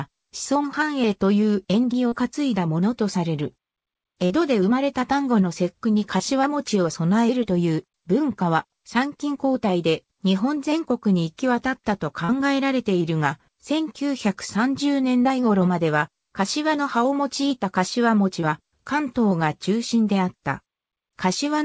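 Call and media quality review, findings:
Short concealed packet loss at 2.08, 4.26, 6.18, 7.43, 12.25, 15.23, 18.41 s. Brief smears and wobbles where the receiver's concealment extends the preceding sound across gaps fitting one or two lost 20 ms packets. G.722 call path, nothing above 8 kHz.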